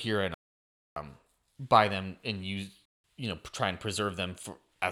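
A speech clip with two dropouts where the audio cuts to dead silence: the first from 0.34 to 0.96 s, about 0.62 s long, and a shorter one from 2.85 to 3.04 s, about 0.19 s. These are likely Bluetooth stalls, where interference delayed packets on the wireless link and the headphones' buffer ran empty, so playback just paused until the resent data showed up.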